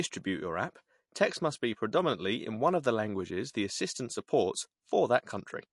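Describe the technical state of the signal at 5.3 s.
At 5.3 s the speech carries the same damage it has from start to finish, likely MP3 compression at a low rate, with a sound that points to roughly 48 kbps. Starved of bits, the encoder discards everything above 11.3 kHz and drops weaker frequency lines frame by frame, giving a plainly audible watery, swirling quality. A spectrogram shows a hard flat ceiling at 11.3 kHz and flickering holes in the upper bands.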